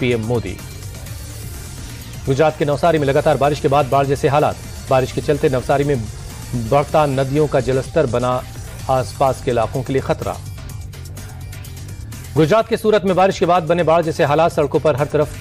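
No technical faults can be heard anywhere in the audio. Nothing at any moment stands out as a problem in the recording or playback chain.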